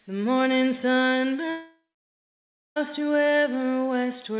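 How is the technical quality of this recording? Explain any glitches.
The recording has one clear glitch: a long network dropout from 1.5 to 2.78 s. The audio was carried over a call link whose codec fits G.711 A-law at 64 kbps, so nothing reaches above 4 kHz.

The break is likely a network dropout. For about 1.26 s no audio arrived, so the receiver stretched the last sound into a fading buzz, and roughly the final 0.97 s of the gap is near-silence. When audio resumes, that stretch is simply gone.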